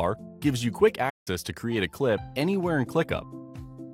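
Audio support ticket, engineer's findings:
Playback stall, 1.09 s to 1.28 s. Output drops to silence mid-flow for about 165 ms, then the sound resumes. Probable component: player/output path. Likely cause: playback buffer underrun or blocked audio thread, leaving the device with no samples to render until the feed recovered. Check decoder/network supply rate and thread scheduling around that point.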